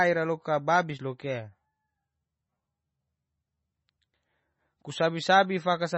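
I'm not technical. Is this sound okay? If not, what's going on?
No. The speech has a watery, swirly quality from start to finish. The treble is missing, so it sounds dull and muffled. Nothing is heard above about 8 kHz. S sounds come out with a metallic, chirpy edge, and the starts of sounds are smeared. This is most likely heavy MP3 compression. The file was squeezed too small. To save space, the encoder dropped the high frequencies and faint details, and those details flicker on and off.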